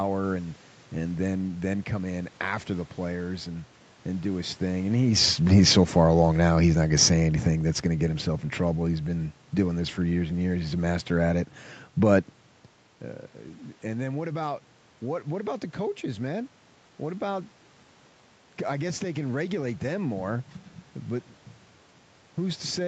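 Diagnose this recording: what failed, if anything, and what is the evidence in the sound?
Call-processing fault, automatic gain falling: from 4.78 to 7.33 s, between "and and do his" and "that's gonna get himself", the level sinks about 4 dB as the AGC, judging the input too loud or its background noise too strong, lowers its gain. Unlike a talker leaning back, the room noise sinks too.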